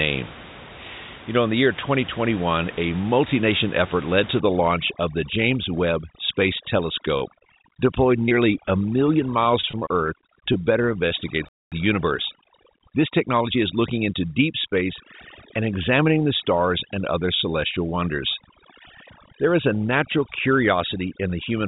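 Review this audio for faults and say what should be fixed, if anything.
Overdone noise removal runs from 4.40 s, just after "nation effort led to", to the end. The room noise, about 17 dB below the speech, is being suppressed band by band, so the background breaks into twinkling, warbling specks and quiet speech detail is pulled down with it. Reduce the suppression strength or apply a noise floor limit so bands are attenuated rather than gated off.

Repeated packet loss (robotic sound) occurs at 7.18 to 7.88 s with five gaps, the longest 30 ms. It recurs at 8.26 to 8.71 s with four gaps, the longest 12 ms, and at 9.61 to 10.56 s with seven gaps, the longest 24 ms. Each hole is patched by extending the preceding sound, and the next loss arrives before recovery, giving choppy, pieced-together audio. Improve network stability or add forward error correction on the link.

Short concealed packet loss appears at 11.08 to 11.12 s and 11.20 to 11.24 s, each covering about 20 ms of missing audio. 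The decoder extrapolated from the preceding signal and cross-faded back, leaving brief smears. Adding redundancy to the stream would let these short losses be recovered instead of concealed.

A playback stall silences the output from 11.49 to 11.72 s, about 232 ms. The likely cause is the player running out of buffered data or its output thread being blocked, with sound resuming once it recovered. Give the playback thread priority and keep a deeper buffer margin.

Time-compressed catch-up follows from 11.72 to 14.04 s. The player trims its backlog by cutting and cross-fading short segments, so speech runs about 1.1 times faster at unchanged pitch. Size the jitter buffer so stalls are rarer and the need to catch up is reduced.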